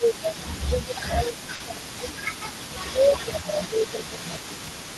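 From the start to the end of the clip there is an echo leak: a faint copy of the speech returns about 259 ms behind the original, roughly 15 dB quieter, most likely because a loudspeaker's echo canceller let part of the pickup through. Unlike a short room reflection, the delay is long enough to hear the copy as a separate repeat, and it stays at the same lag throughout.

From 0 to 2.13 s, and again from 2.44 to 4.35 s, the speech is suppressed in double talk. The level sinks by up to about 10 dB, for around two seconds in the first stretch and about one and a half in the second. The likely cause is an echo canceller that could not tell near talk from returning echo and turned both down. Dropouts from lost packets sound different: these dips are ducks spread over long stretches, not brief holes.

At 1.55 to 1.62 s there is a short stall from a late packet. A packet arrived late, the jitter buffer ran dry, and the last sound was held for 50 ms before playback resumed from the same point. 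Nothing is lost, so the sound drags with a slight buzzy smear rather than skipping forward.

At 1.81 s and 4.68 s there is audio missing between chunks. Around 40 ms vanish each time and the edges are butted together, likely where a processor switched between blocks, which fits one-second chunks. The sound jumps ahead. A late-packet stall holds the sound in place. Here it skips forward.

All of this passed over the Opus call path, whose top end stops near 12 kHz.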